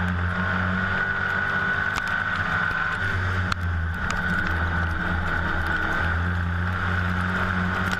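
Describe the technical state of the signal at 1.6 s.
At 1.6 s the signal is intact, with no audible dropout, distortion or other technical fault at that point.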